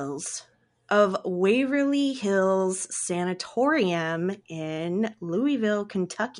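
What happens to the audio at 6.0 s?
Nothing goes wrong at 6.0 s; the speech carries on intact through that moment with no dropout, click or distortion.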